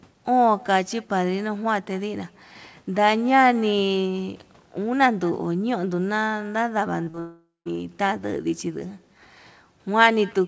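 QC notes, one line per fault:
throughout: echo with no canceller. The far end plays the call through a loudspeaker, its microphone picks that playback up again, and no echo canceller strips it out, so the sound returns after the network round trip. Every phrase is trailed by a faint, thin copy around a fifth of a second later, sitting about 28 dB below the direct sound.
7.04 to 7.09 s and 7.10 to 7.16 s: short concealed packet loss. Two brief runs of audio did not reach the decoder in time, one about 20 ms and one about 40 ms of missing signal. The receiver patched each hole with roughly 26 ms and 31 ms of synthesised continuation, extending the preceding sound and then crossfading back. Each shows up as a quick smear or wobble in the speech, close together, just ahead of the larger break that follows.
7.20 to 7.68 s: long network dropout. Nearly half a second of audio, about 460 ms, failed to arrive, and the sound points to a network stall as the likely cause. 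The receiver first stretched the last sound into a fading continuation, then gave up, leaving about 170 ms of near silence before real audio resumes. The lost stretch is simply gone. Playback picks up later in the speech with a jump, its band still limited to 8 kHz by the G.722 codec.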